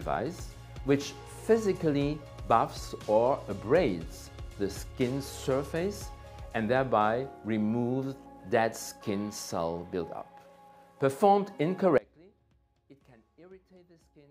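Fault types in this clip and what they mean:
Audio dropout to a faint residue: at 11.98 s the sound breaks off abruptly and never returns before the clip ends, leaving only a faint sound roughly 25 dB below the signal's normal level. The likely cause is a loss of the wanted feed while the path after the break stayed live, so the gap is not true silence. Unlike a fade, the level drops without any gradual decline. Unlike a natural pause, the change is abrupt and faint sound remains in the gap.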